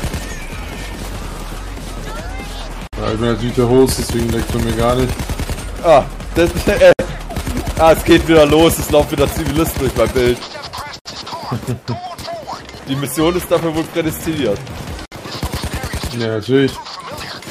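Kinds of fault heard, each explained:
Gap at a join of encoded pieces: separately encoded pieces were joined untrimmed, so encoder start delay and end padding remain as silence. Here, 55 to 64 ms dropouts recur every 4 s (2.87, 6.93, 10.99, 15.06 s), and the sound resumes where it stopped.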